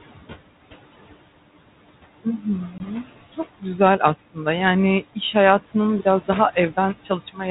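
From the start and all the way through, there are noise suppressor artifacts. The suppressor pulls the room noise down by about 17 dB between phrases and lets it rise again under the speech.

At 2.78 to 2.80 s there's packet loss on an ADPCM call. A clean 20 ms hole opens, which fits a single lost packet. Because the decoder's predictor and step size drift out of step with the sender's, the speech comes back slightly distorted before settling.

From 7.04 to 7.4 s, right after "iş hayatının biraz daha", there's speech cut by the noise suppressor. The suppressor mistakes quiet parts of the speech for background and dips them by up to about 16 dB, so around 150 ms of speech sounds swallowed and faint. The band-limited telephone sound, consistent with G.726 at 32 kbit/s, and the room noise sitting about 17 dB under the speech are just part of this path.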